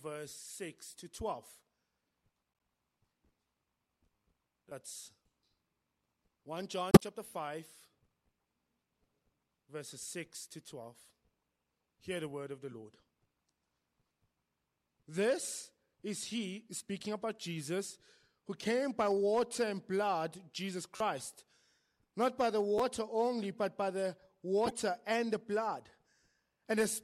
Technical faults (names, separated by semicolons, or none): repeated buffer; corrupt frame decoded